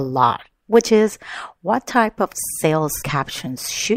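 Speech, with AAC frame loss with concealment just after "what type of sales", from 2.97 to 3.03 s: a brief smeared, noisy patch of about 43 ms, which fits two lost frames rebuilt from the last good spectrum. Unlike a plain dropout, it never falls silent.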